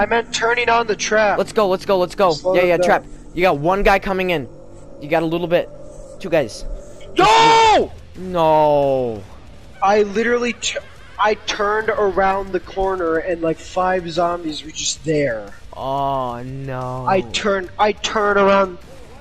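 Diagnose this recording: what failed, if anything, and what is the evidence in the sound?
Nothing failed here: there's no dropout, click, distortion or glitch to point at, so there's no faulty stage to diagnose.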